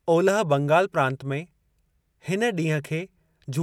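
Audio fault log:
No technical faults can be heard anywhere in this speech recording, with no interruptions, distortion, or added noise.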